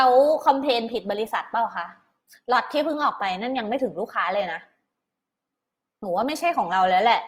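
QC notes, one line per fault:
Throughout, Opus compression: plainly audible roughness and graininess across the speech, with little swirl. Band energy holds, but fine detail sounds replaced by folded or noise-like fill. This fits a likely Opus encode in CELT mode near 24 kbps, keeping full bandwidth.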